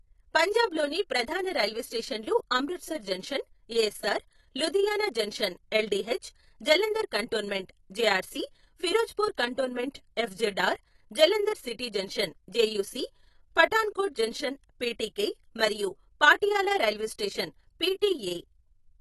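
From start to finish the speech sounds dull and smeared, with a lowered top end and a fizzy warble on sibilants, likely AAC compression at roughly 32 kbps.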